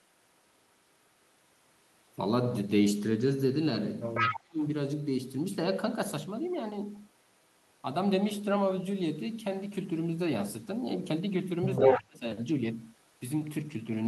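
At 4.14 s there's a short burst of echo leak: a copy of the speech comes back about 149 ms late and roughly as loud as the original, until 4.39 s. That's likely a far-end loudspeaker whose echo canceller didn't scrub everything its mic picked up. It overlaps speech suppressed in double talk from 4.2 to 4.63 s, where the talker dips hard, something like 35 dB at the deepest, across a few hundred milliseconds. The likely cause is the canceller failing to separate the talker from the loudspeaker echo while both sides were active, so it turned everything down.

The same pair comes back later. From 11.76 to 12.02 s the echo leak reappears, again 149 ms behind, but this time it's actually louder than the speech, by roughly 10 dB, so it really stands out. Speech suppressed in double talk follows from 11.79 to 12.26 s, with the talker cut by around 30 dB over about a third of a second.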